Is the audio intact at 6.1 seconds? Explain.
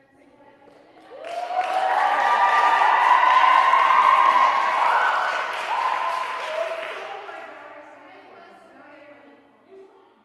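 Yes, at 6.1 seconds the sound is intact, with no dropout, glitch or other fault at that moment.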